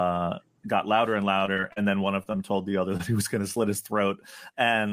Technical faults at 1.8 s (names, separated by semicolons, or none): repeated packet loss (robotic sound)